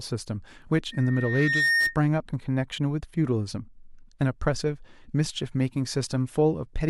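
A speech clip with loudspeaker feedback squeal from 0.92 to 1.97 s: a 1.8 kHz tone swells over roughly 0.7 s to sit about 5 dB above the voice, because the mic is hearing its own speaker.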